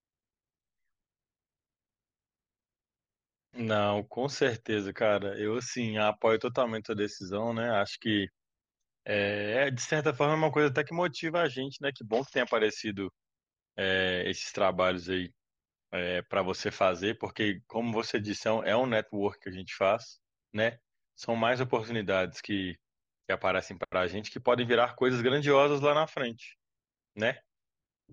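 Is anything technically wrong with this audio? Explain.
No, nothing technically wrong can be heard in this speech recording. There is no fault to point to at any moment in the clip.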